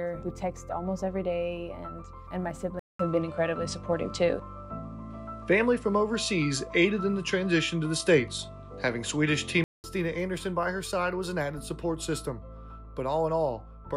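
At 2.79 s the sound drops out for 0.2 s, then returns duller, with nothing above 10.9 kHz. The level shifts by about 5 dB and a faint new hiss appears. This likely reflects an input switched to a poorer device. Full clarity returns at 9.84 s.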